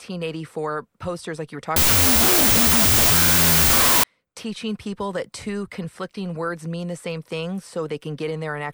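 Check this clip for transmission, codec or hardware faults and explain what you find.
One fault: a wrong sample width from 1.76 to 4.04 s, after "posters like you were" and before "teaching people that two". Samples that fit 32-bit float data being read as 16-bit integers split each value in two, giving loud noise over buried speech at half speed and lowered pitch.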